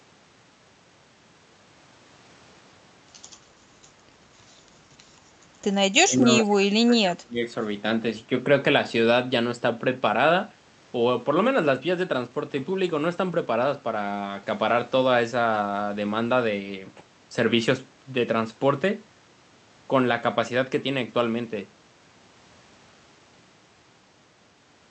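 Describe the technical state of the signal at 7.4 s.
The echo canceller likely treated overlapping talk as echo, causing speech suppressed in double talk from 6.0 to 7.5 s; at 7.4 s the voice is ducked, with the deepest drop roughly 30 dB.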